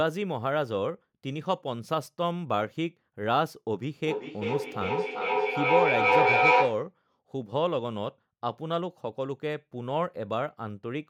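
From 4.06 s to 6.93 s the speech comes round again roughly every 0.4 s, a feedback echo between two devices: one device replays the other's microphone, which picks it up again outside its own echo canceller's reach. Unlike single-device echo, the repeats build up rather than fade, peaking about 6 dB above the speech.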